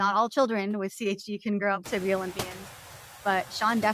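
Speech, with a noise suppressor throughout cutting steady background by only about 5 dB frame by frame, so the residual noise dips between words and swells back under them, most audibly once the room noise rises by about 24 dB around 2 s to sit about 16 dB below the speech.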